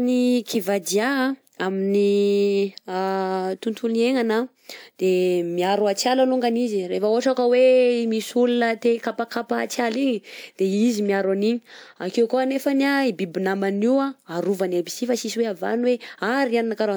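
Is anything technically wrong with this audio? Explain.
No, nothing in this speech recording registers as a technical fault on listening.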